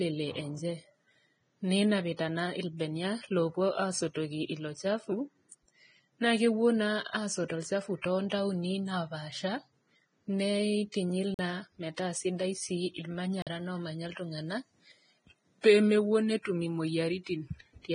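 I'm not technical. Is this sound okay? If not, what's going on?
No, there are three problems. The whole recording was likely squeezed hard with Vorbis compression, a format that saves space by throwing away detail. Here nothing above about 9.7 kHz survives, so the speech sounds dull, hissy and grainy, with a rough edge on every sound.

There is also pre-echo just after "asotu olchafu", from 8.02 to 8.04 seconds. The compression spreads its noise across a short chunk of sound, so a burst of hiss about 26 milliseconds long lands just before a sharp sound, which then comes out softened and smeared.

Finally, there are two blocks of digital silence, at 11.34 seconds and at 13.42 seconds. The second falls between "metaa sidai sii" and "omanya iltung'ana". Each time, a chunk of audio was swapped for pure silence, probably because the playback system fell behind. Each gap lasts about 46 milliseconds, which fits a 2048-sample buffer, and is heard as a tiny hole.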